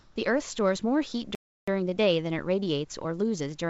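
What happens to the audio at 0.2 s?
Right around 0.2 s the real room background returns, replacing a steady, featureless hiss that filled the opening 0.16 s at a level about 2 dB different. This is likely comfort noise in place of the background: the sender paused transmission, so the receiver generated synthetic noise shaped to approximate the room.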